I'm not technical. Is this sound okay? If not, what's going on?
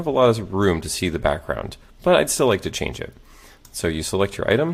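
Yes, this sound is okay, and there's nothing wrong going on.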